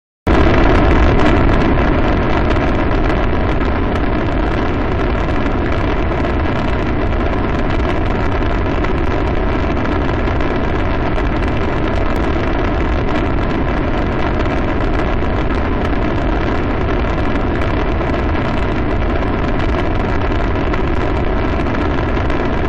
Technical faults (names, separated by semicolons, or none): none